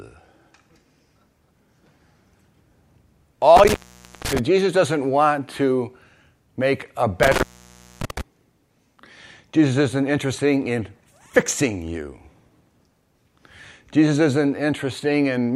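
It's a speech clip with an intermittent contact: the sound drops out from 3.56 to 4.39 s and again from 7.23 to 8.21 s, crackling at each edge. A loose cable or plug is opening for about 0.51 s and 0.59 s, leaving faint hiss.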